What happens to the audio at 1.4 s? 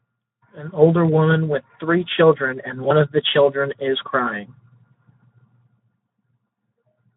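The speech passes through the Speex codec at a starved setting, around 11 kbps, throughout; its thin excitation makes it noisy and hoarse.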